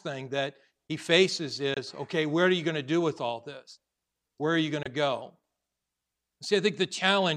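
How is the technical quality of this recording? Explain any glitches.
The speech has two brief gaps. From 1.74 to 1.78 s and again from 4.83 to 4.87 s, the sound cuts out and returns with a short hole. Each is most likely a Bluetooth dropout: a packet arrived too late for the headphones and was discarded. Each hole fits one lost frame of roughly 23 ms. Unlike a stall, the speech resumes further along, as though it kept playing through the silence.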